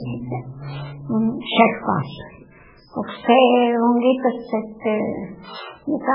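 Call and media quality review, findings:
Speech band-limited and watery throughout, with nothing above 5.2 kHz. Likely MP3 compression, heavy damage consistent with a very low bitrate around 8 kbps. Starved encoder cuts treble at a fixed point and toggles weak frequency lines between frames, causing swirl and metallic chirps on s sounds and smeared attacks. Unlike a plain low-pass filter, the cut-off comes with that frame-to-frame shimmer and chirping.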